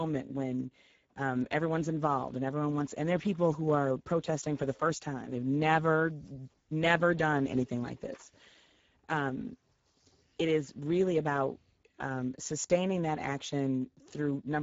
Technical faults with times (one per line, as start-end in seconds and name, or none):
0.00-14.63 Speex codec